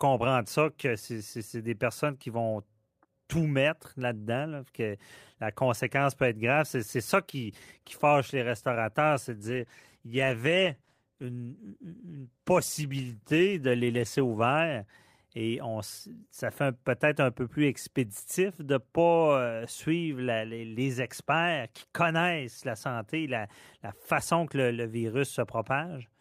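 Speech, with a call bitrate drop from 9.32 s to 14.53 s, just after "qui fâche les restaurateurs". The encoder is starved of bits, so the sound turns rough and muffled, with high frequencies cut, which fits a fall from roughly 40 kbps to about 14 kbps.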